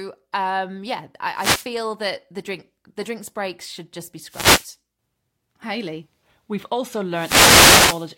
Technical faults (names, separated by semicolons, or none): wireless microphone noise hit